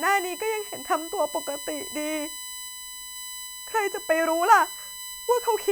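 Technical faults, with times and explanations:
throughout, USB whine: a fixed 1 kHz tone with harmonics, strongest at 8 kHz, about 15 dB under the speech, from bus-frame current leaking into power or ground. It shows as unbroken horizontal spectrogram lines.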